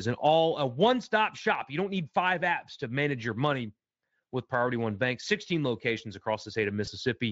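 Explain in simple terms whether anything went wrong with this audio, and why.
Yes, something went wrong near the end. From 6.85 to 6.90 s there is a brief moment of VoIP packet loss concealed by the speech codec. About 20 ms of sound went missing in transit, which points to a single lost packet. Rather than leaving a silent gap or a click, as a plain dropout would, the decoder guessed what came next by stretching the previous sound, so you hear a short buzzy or noisy smear that fades and a weak, blurred voice just afterwards. The Speex codec itself adds little or no audible damage.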